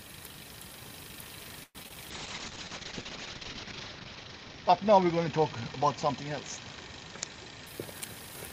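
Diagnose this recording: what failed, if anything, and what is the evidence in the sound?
The network stage failed first with repeated packet loss (robotic sound) between 1.63 and 1.98 s. Four gaps opened in quick succession as packets went missing or arrived too late, and the receiver concealed each hole by extending the previous sound. About 42% of that stretch is synthetic fill, with roughly 60 ms simply absent and the longest gap lasting 115 ms. The result is a choppy texture with pieces dropped out.

Call processing then cut the encoder's budget in a call bitrate drop from 2.12 to 7.72 s. A falling bandwidth estimate pushed the codec into much coarser coding, and the sound fits a fall from about 32 kbps to about 7 kbps. The audio band narrows from 20 kHz to 8 kHz, so the high end disappears. The sound turns rough, watery and muffled, and it is poorest during the roughly 1.6 s spent at the lowest rate.

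The jitter buffer then ran a speed-up from 7.50 to 8.37 s, overlapping the end of the low-bitrate stretch. The buffer had built up more audio than its target, so the receiver shortened its delay by cutting out short pitch-period-sized pieces many times in a row. About a tenth of a second was removed in total. Playback runs at about 113% of normal speed with unchanged pitch, so the passage sounds hurried.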